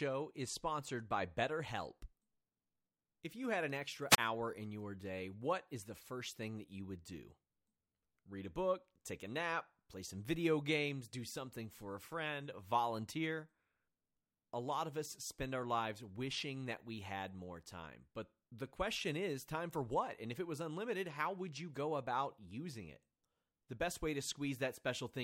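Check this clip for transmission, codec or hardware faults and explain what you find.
One fault appears, a wireless microphone squelch dropout between 4.09 and 4.18 s. The analogue FM radio link weakens until the receiver's squelch gates its output, so the speech gives way to a short swell of hiss, then a silent gap of 32 ms before it resumes.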